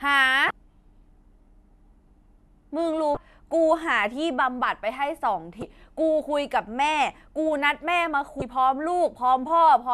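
At 0.47–0.51, 3.14–3.17, 5.59–5.63 and 8.39–8.42 s, damaged data in the compressed stream makes the decoder misread frames and resync, producing brief glitches, each seen as a broadband smear or waveform spike.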